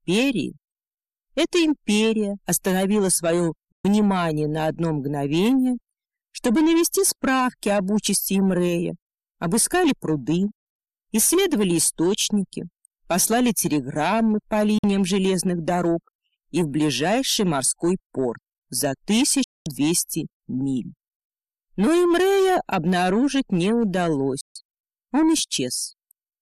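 A digital broadcast dropout recurs four times: the receiver lost valid frames and muted until clean ones arrived, with a fade of about 3 ms at each edge. The sound drops to silence at 3.72–3.85 s, 14.78–14.84 s, 19.44–19.66 s and 24.41–24.56 s, holes of 120, 48, 216 and 144 ms. Each length fits whole frames of about 24 ms, and the audio sent during those gaps is gone.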